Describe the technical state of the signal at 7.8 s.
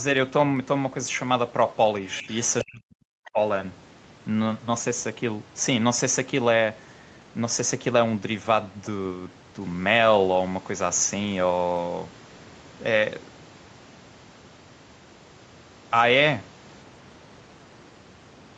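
At 7.8 s the speech is intact, with only the ordinary high-pass and band limit of call microphone processing and no fault present.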